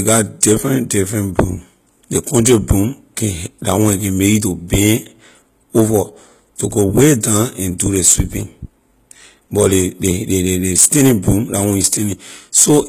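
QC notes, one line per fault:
Throughout, HE-AAC compression: the speech keeps a bright top reaching about 21 kHz, but s sounds are gritty, lispy and metallic, likely because the treble is rebuilt from copied lower bands rather than coded, which fits a low bitrate near 20 kbps.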